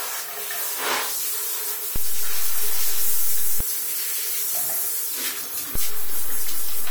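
An everyday-sounds recording carrying two DC steps. At 1.96 s the waveform's zero line jumps to an offset, heard as a low thump or click, and it holds until 3.61 s. A further step at 5.75 s shifts the baseline again, and that offset persists to the end of the clip. Each sudden jump in the baseline, from a converter recalibrating or an offset input being switched in, produces the thump or click.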